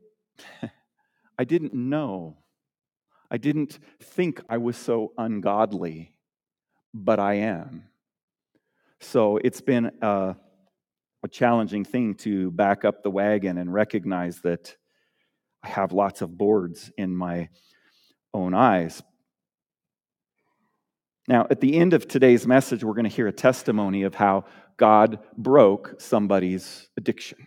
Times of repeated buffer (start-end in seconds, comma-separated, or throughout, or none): 1.70-1.73, 15.71